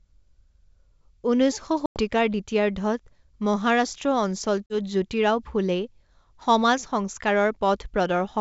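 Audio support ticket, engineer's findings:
Packet loss on ADPCM call: hard-edged silent holes at 1.86–2.01 s (about 100 ms, several packets) and 4.67–4.76 s (about 40 ms), on a G.722 wideband path. Unlike concealed loss, speech returns slightly distorted while the predictor and step size resync.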